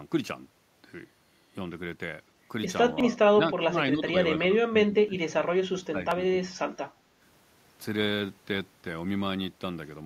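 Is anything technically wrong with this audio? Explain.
Yes. Speech suppressed in double talk occurs at 3.1–3.73 s, 3.93–4.14 s, 4.4–5.34 s and 5.75–6.61 s. The likely cause is an echo canceller mistaking overlapping far-end talk for echo and attenuating this talker. The speech dips or breaks up, by roughly 25 dB at worst, though only slightly around 4 s.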